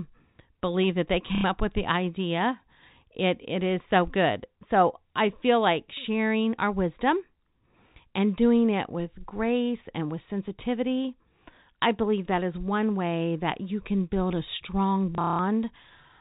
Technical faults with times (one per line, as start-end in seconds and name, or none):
1.35-1.44 packet loss with last packet repeated
15.15-15.39 packet loss with last packet repeated